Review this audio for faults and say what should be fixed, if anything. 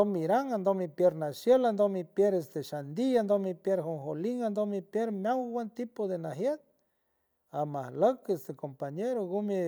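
Nothing here needs fixing, so this one can go ahead as it is.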